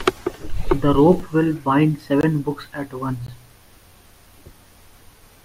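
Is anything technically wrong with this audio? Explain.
Yes. The speech contains three blocks of digital silence. At 1.20 s, just before "will bind the", the sound drops out for about 2.4 ms. At 2.21 to 2.23 s, between "will bind the" and "books at once", a 21 ms gap occurs. Its length fits a 1024-sample buffer. At 3.27 s, right after "books at once", about 18 ms goes missing. In each case the output buffer was likely not filled in time, so silence replaced the audio. The sound cuts out and back with no fade. The first is a sharp tick. The longer two are brief holes.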